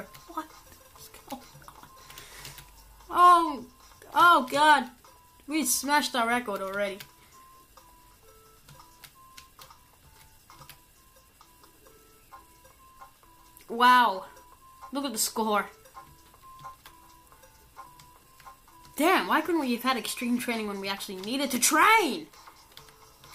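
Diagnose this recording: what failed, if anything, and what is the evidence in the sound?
Nothing failed; no faults detected.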